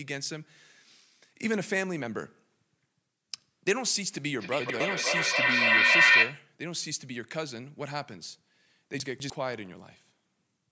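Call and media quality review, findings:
Feedback echo between two devices, 4.39–6.52 s: two endpoints in one room on the same call, each microphone re-capturing the other's playback, which neither echo canceller can remove. Speech returns at roughly 300 ms intervals, thinner and ringing, with repeats building to about 12 dB above the speech instead of decaying.

Chunks out of order, 4.6–4.8 s and 9.0–9.3 s: 100 ms audio chunks delivered or written late, one chunk late at 4.6 s and two chunks late at 9.0 s. Speech is briefly jumbled at the hard joins, inside the echo burst at 4.6 s.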